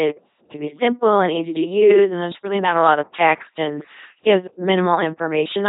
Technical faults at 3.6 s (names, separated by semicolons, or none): LPC-10 vocoder